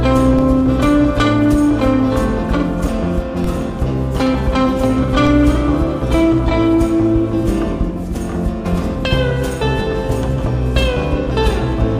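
At 0.39, 3.44 and 5.27 s, DC steps of about -12 dBFS jump the zero line, each a low thump that fades through a 20 Hz high-pass. Unlike dropouts, the sound itself continues unbroken.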